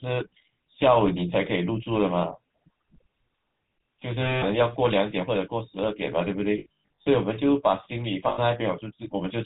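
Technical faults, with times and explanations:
Throughout: GSM full-rate codec. The speech has a plainly audible buzzy, gravelly roughness, and nothing reaches above 4 kHz. The coder models the vocal tract and drives it with sparse, regularly spaced pulses, which fits a 13 kbps full-rate stream.
4.22–4.43 s, 6.58–7.07 s and 8.28–8.39 s: lost GSM frames. Each gap is held as a rough, metallic ring because the decoder repeats the last good frame. The middle stretch has scattered losses, the longest run around a tenth of a second.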